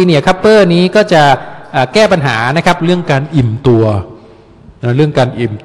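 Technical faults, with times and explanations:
2.80–5.65 s, wrong sample rate: from here to the end everything slows to about 0.92 speed and drops roughly 1.5 semitones, with pitch and tempo sliding together. That fits 48 kHz material being played out at 44.1 kHz without any resampling.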